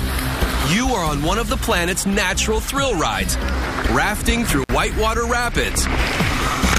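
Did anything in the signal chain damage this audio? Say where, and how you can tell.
Yes. An intermittent contact in the analogue wiring breaks the audio from 4.63 to 4.70 s, with the line open for about 54 ms. A loose cable or plug briefly lost connection, so the signal drops out with crackle at the break's edges, leaving faint hiss while the circuit is open.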